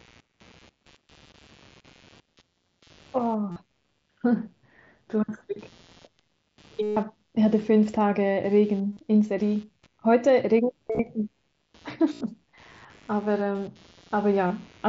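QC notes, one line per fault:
Throughout, computer activity noise: a faint buzzing chirp pulsing around 150 times a second sits roughly 35 dB below the speech, rising and falling with the machine's workload rather than the talker. Processor or peripheral load currents disturb the ground the audio circuit shares.
3.51–3.56 s, 6.82–6.97 s, 8.92–8.97 s, 10.87–10.99 s, 12.13–12.21 s, 14.47–14.50 s, concealed Bluetooth headset packet loss: brief buzzy held tones with a small warble as real speech resumes. The longest is about 140 ms at 6.82 s. The 10.87 s event is several short gaps, none over 30 ms, spread across 120 ms. Lost headset packets were replaced by repeating the closest-matching recent stretch of waveform, and the gap lengths fit mSBC's 7.5 ms frames.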